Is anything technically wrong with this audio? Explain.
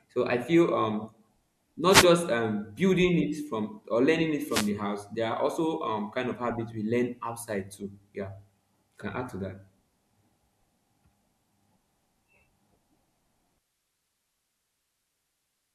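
Yes, there are two wireless microphone noise hits in this speech: 1.88 to 2.07 s, and 4.48 to 4.71 s, just after "learning it". Each time, reflections briefly cancelled the FM mic's radio signal, so receiver noise surged up as a quick swish of static over the voice.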